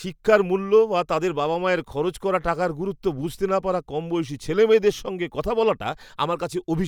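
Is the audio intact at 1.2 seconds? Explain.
Yes, the speech at 1.2 seconds plays through intact, with no dropout, click, distortion or other fault at that moment.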